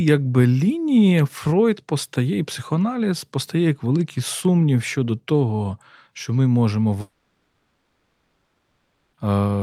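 A long network dropout likely interrupted this speech recording at 7.01 s, right after "того що ми можемо". No audio reached the receiver from there until 9.15 s, a gap of about 2.1 s. The receiver stretched the last sound it had into a buzzy or hissy continuation that fades away, and roughly the final 0.62 s of the gap is plain silence. When the audio returns at 9.15 s, the lost stretch never comes back.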